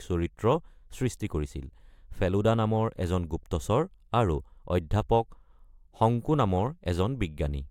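No technical faults are audible anywhere in this speech.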